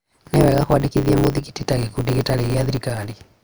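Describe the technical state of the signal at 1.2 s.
A steady 100 Hz buzz runs under the speech, which plays about 1.16 times too fast with its timbre intact, as it does throughout. This is a block size mismatch (truncated): the tail of each block, which fits 512-sample writes, is discarded.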